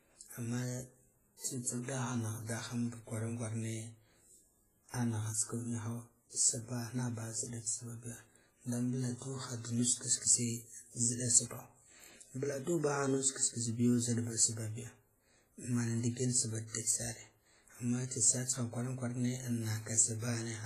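A low-bitrate transform codec, likely WMA compression at around 24 kbps, degrades the speech from start to finish. Its long blocks smear quantisation noise over tens of milliseconds, leaving heavy ringing, a washy hiss that swells with the sound, and nothing above 15.4 kHz.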